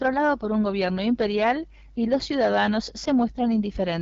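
Throughout the speech, hard clipping cuts the loudest peaks flat under an overload of about 5 dB. It crackles only on peaks, not as constant fuzz, because under one percent of samples exceed the limit.

The AMR wideband (HD Voice) codec also runs across the whole clip. The plainly raspy, rough texture, with nothing above 7.6 kHz, fits its low 8.85 kbit/s rate rather than overload.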